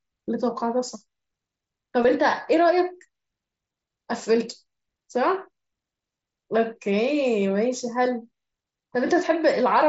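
At 2.03 s, concealed Bluetooth headset packet loss drops about 15 ms of audio. The receiver fills the gap by repeating recent waveform, leaving a brief buzzy blip.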